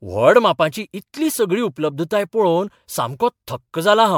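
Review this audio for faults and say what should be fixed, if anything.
Throughout, the speech sounds swirly, smeared and hollow, with blurred attacks and nothing above 19.9 kHz. This is likely generation loss from around ten MP3 re-encodes, pointing to 128 kbit/s, each pass quantising on a shifted frame grid so noise and spectral holes pile up. To prevent it, keep a lossless master and encode to MP3 only once, as the final step.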